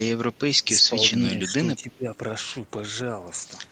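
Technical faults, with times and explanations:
0.64–0.94 s, 1.31–1.49 s and 1.82–2.07 s, speech suppressed in double talk: the echo canceller, likely confused by both sides talking at once, pulled the talker down along with the echo, so the speech dips by about 10 dB in the first two spots and about 15 dB in the third.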